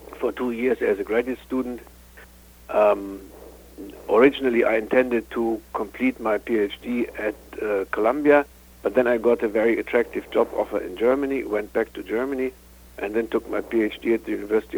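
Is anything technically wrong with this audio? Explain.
No, nothing is technically wrong with this audio.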